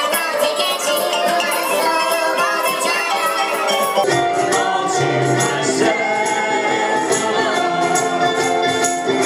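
From 0.0 to 4.04 s, a wrong sample rate makes the audio run 1.5 times fast and about 7 semitones high, which fits 32 kHz material played at 48 kHz without conversion. Tempo and pitch rise together, whereas a pitch shift would preserve timing.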